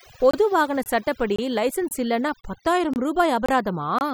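From the first moment to the last, the background is near-silent and flecked with twinkling specks. That is overdone noise removal: a noise reduction stage set too aggressively pulls individual frequency bands down or switches them off whenever they sit close to its noise estimate. The background noise goes, but so do the quieter components of the voice, leaving isolated tonal sparkles where bands flicker on and off.

Running across that, the sound drops out abruptly eight times, each hole about 25 ms long with hard edges: 0.31–0.33, 0.83–0.86, 1.36–1.39, 1.89–1.91, 2.41–2.44, 2.94–2.96, 3.46–3.49 and 3.99–4.01 s. These are gaps between chunks. The audio was handled in 0.5-second pieces, and silence was inserted at each join. Nothing is lost, but the flow is interrupted at a steady rhythm, roughly every 0.53 s.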